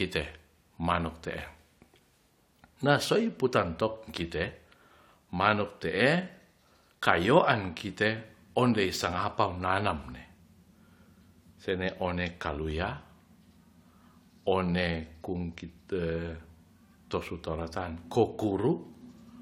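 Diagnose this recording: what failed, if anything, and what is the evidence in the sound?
Nothing failed in this recording, and there is no evidence of a fault anywhere in the sound.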